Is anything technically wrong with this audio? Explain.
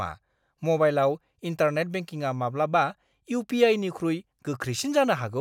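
No, nothing technically wrong can be heard in this speech recording.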